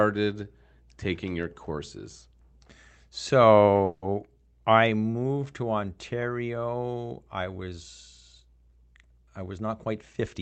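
From 3.84 to 4.05 s there is a call audio freeze. The last sound stretches into a fading buzz or hiss for about 180 ms. Then the audio resumes where it stopped, with nothing lost. Delayed packets likely drained the jitter buffer, adding 180 ms of delay.

From 10.02 to 10.35 s, a jitter buffer speed-up follows. The receiver trims short pitch-period slices to shed a backlog, around 50 ms in all. The sound plays at 112% speed at unchanged pitch. It comes across as hurried. The Opus call path caps the band near 8 kHz.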